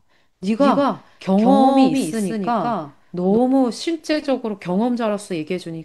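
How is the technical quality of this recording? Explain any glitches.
The recording has one clear glitch: a doubled audio track from 0.59 s to 3.37 s. During that span the speech is heard twice, a second full-band copy trailing the first by roughly 150 ms at about the same loudness. This is likely caused by the audio being captured again through a slower path, or by an edit leaving two out-of-step copies. Unlike an echo or room reverb, the repeat has no decay or room colour, and it switches on and off abruptly.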